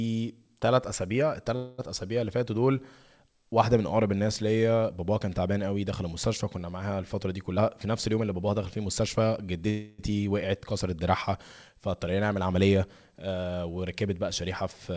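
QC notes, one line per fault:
1.56–1.80 s, call audio freeze: The sound stalls and the last moment is stretched into a buzzy sustain that fades over about 222 ms, likely because packets were held up and the jitter buffer ran empty. On a spectrogram this shows as a flat, smeared band of repeated harmonics with no new onsets, dimming toward the end. The waveform shows a repeating, decaying cycle. Nothing is lost. The audio resumes exactly where it stopped, now about 222 ms later.
7.52–9.28 s, jitter buffer speed-up: Over this stretch the audio runs at about 113% speed while the pitch stays put, so it sounds hurried. After a backlog, the receiver trimmed its excess delay by cutting many pitch-period-sized slices, removing roughly a fifth of a second in total. On a spectrogram the harmonic spacing is unchanged, but syllable-length events are visibly compressed in time. In the waveform the periodic cycles join up without gaps where the slices were taken out.
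9.70–10.12 s, call audio freeze: A longer stall than the first, with the preceding sound held as a fading buzz for about 284 ms before fresh audio arrives. This is likely another jitter-buffer underrun from delayed packets. The spectrogram shows a static, slowly darkening harmonic smear bounded by sharp edges, and the waveform shows a repeating decaying cycle. No content is skipped, so the audio afterwards is shifted later by roughly the length of the fill. The band limit at 8 kHz seen throughout fits the G.722 call codec.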